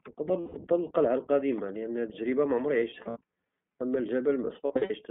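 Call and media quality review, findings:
iLBC codec, whole clip: band-limited to roughly 150 Hz to 3.4 kHz, rough, synthetic speech texture. Narrowband frame-independent excitation coding, fits the 15.2 kbps mode with 20 ms frames.

Lost iLBC frames at 0.40–0.56 s, 2.80–3.17 s and 4.66–4.91 s: buzzy held-vowel fill, short gaps under about 70 ms each in the last two. Pitch-cycle concealment, quick recovery.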